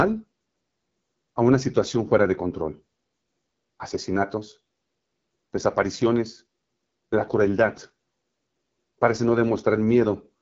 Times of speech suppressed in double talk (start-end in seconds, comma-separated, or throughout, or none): none